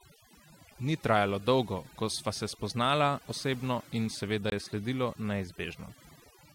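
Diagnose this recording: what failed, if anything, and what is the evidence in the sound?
Overdone noise removal runs through the whole speech clip, at the call-processing stage. The background has been pulled down, with twinkling specks where isolated frequency bands flicker on and off. The suppressor was set too aggressively: any band close to its noise estimate was cut hard, and the quieter low-level parts of the voice fell below that line and were removed along with the noise.

A corrupt frame muted at 4.50 to 4.52 s points to a codec or storage fault. A hole of about 22 ms opens abruptly in the speech, with no fade, and the sound resumes on schedule afterwards. The decoder rejected damaged compressed data and the player substituted silence for it. The length fits a short run of small codec frames rather than a network delay. Because the gap is filled rather than skipped, the timing of the speech is unchanged.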